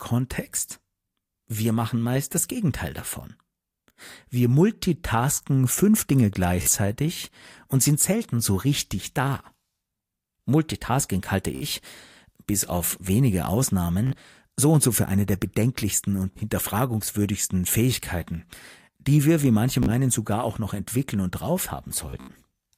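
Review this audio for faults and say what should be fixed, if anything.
A short buzzing, machine-gun repeat breaks into the speech at 3.98 s, 6.62–6.71 s, 11.55–11.66 s, 14.07–14.16 s, 16.33–16.40 s, 19.83–19.92 s, and in a scattered burst from 22.10 to 22.41 s. This is Bluetooth stutter. Packets arrived late or not at all, so the receiver looped its last small slice of audio until fresh data came. Speech then resumed further on, with 30 to 61 ms skipped at each event and about 168 ms lost across the final burst, whose longest run is about 76 ms. Keep the transmitter close and away from Wi‑Fi or other 2.4 GHz interference, or give the receiver a larger jitter buffer.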